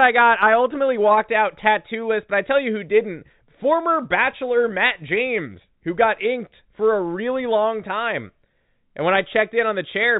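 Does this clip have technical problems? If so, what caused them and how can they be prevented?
No, this clip has no technical problems, so there is nothing that needs preventing.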